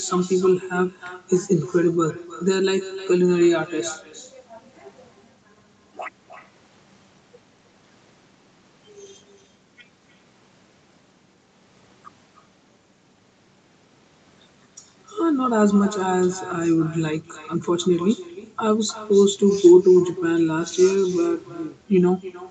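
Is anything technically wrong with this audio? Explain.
Yes, there's echo with no canceller running through the whole clip. The far end is playing the call on a loudspeaker, their microphone picks it back up, and nothing strips it out, so every phrase returns after the network round trip, roughly a third of a second later. The copy sits about 15 dB under the direct speech, and it sounds thinner, like a faint shadow trailing each phrase. Separately, the top end stops around 8 kHz, which is just the call codec's bandwidth.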